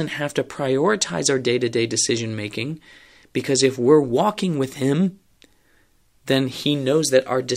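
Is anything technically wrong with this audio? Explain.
No, nothing is technically wrong with this audio.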